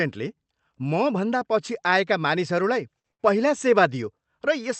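Twice in quick succession, a packet arrived late and the jitter buffer ran dry, producing a short stall from a late packet. Just after "मभन्दा पछि आएका मानिसहरूलाई", the receiver held the last sound from 2.99 to 3.07 s, stretching it by 49 ms, then again from 3.12 to 3.22 s, by 70 ms, before resuming at "पहिला सेवा" with nothing lost. Each sounds like a drawn-out syllable with a slight buzz or dip, heard through the call codec's band-limited, roughly 8 kHz sound.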